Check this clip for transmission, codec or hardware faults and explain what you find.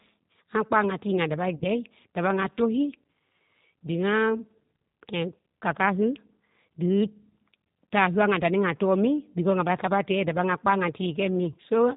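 Two faults are present: a low-bitrate speech codec across the whole clip and one concealed packet-loss event.

Throughout the speech, G.729 coding (the G.729A variant at 8 kbit/s) is plainly audible. The decoder rebuilds each 10 ms frame from a vocal tract filter, a pitch predictor and a handful of pulses, so nothing above 4 kHz survives. The speech stays intelligible but sounds dull, slightly rough and synthetic, with the fine detail of the original replaced by a modelled approximation.

From about 1.55 s to 1.65 s there is VoIP packet loss concealed by the speech codec. Roughly 60 ms of audio went missing, which fits three lost 20 ms packets. The decoder filled the gap by repeating its last pitch and filter settings at falling gain, so the speech smears into a short buzzy tone or coloured noise that fades. Because each G.729 frame depends on the previous one, the speech stays weak or distorted briefly after real data resumes.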